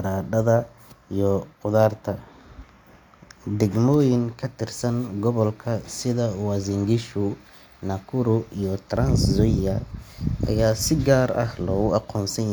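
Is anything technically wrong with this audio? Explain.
No, nothing technically wrong turns up anywhere in this speech recording.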